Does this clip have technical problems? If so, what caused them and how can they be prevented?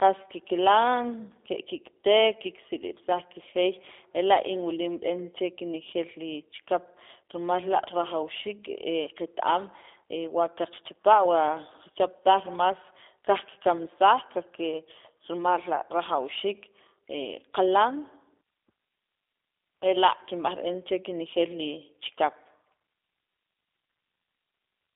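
Yes. G.729 codec damage runs throughout: the speech is confined to roughly 300 Hz to 3.6 kHz and sounds plainly rough and synthetic, which fits an 8 kbit/s G.729A stream rebuilding each 10 ms frame from a vocal tract filter, pitch predictor and sparse pulses. To prevent it, carry the call over a wideband codec such as Opus or G.722 end to end.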